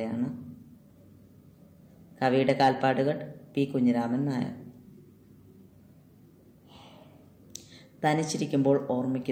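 From 2.25 s to about 2.90 s the audio runs into hard clipping, driven roughly 4 dB past what the stage could pass, so for those 0.65 seconds every peak is sheared off flat at the ceiling. The squared-off tops generate new harmonics high in the spectrum, heard as a gritty crackle riding the loudest moments. On the waveform the peaks sit in flat plateaus; a spectrogram shows bright broadband smearing reaching upward through that stretch.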